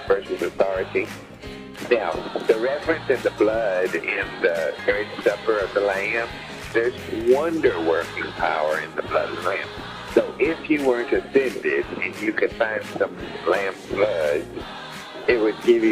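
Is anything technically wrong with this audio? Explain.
Yes. At 7.21 s there is a block of digital silence lasting about 1.3 ms, which fits a single 64-sample buffer left unfilled. The audio drops straight to zero and returns with no fade, so the two hard edges merge into one short tick.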